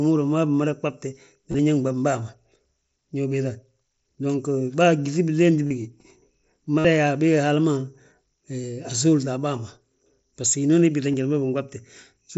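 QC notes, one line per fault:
1.51–1.59, 5.67–5.71, 6.78–6.85, 8.62, 11.12 s: concealed Bluetooth headset packet loss. Lost packets are patched by repeating recent waveform. The 60 ms gap at 6.78 buzzes audibly. On a spectrogram it shows as smeared, comb-like harmonics, and on a waveform as periodic copies with a small warble where real audio resumes.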